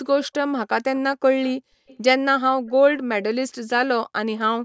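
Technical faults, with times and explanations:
0.22–0.28 s, 1.87–1.97 s, 2.66–2.71 s, echo leak: brief faint repeats trailing the speech by 289 ms, roughly 20 to 35 dB down, likely from an incompletely cancelled far-end loudspeaker. A spectrogram shows weak, shifted copies of earlier harmonic patterns.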